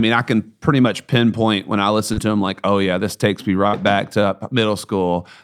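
At 2.13 to 2.19 s, between "much pinpoint when i" and "to them like oh", a short concealed packet loss drops about 40 ms. The receiver bridges it by extending the preceding sound and blending back in, leaving a brief smear rather than an audible hole.

At 3.67 to 3.75 s, after "yeah this takes me" and before "back to", a burst of packet loss removes about 60 ms. The longer fill holds the last sound, fading it, so it reads as a stretched tail with a skip afterward, not just a tiny blur.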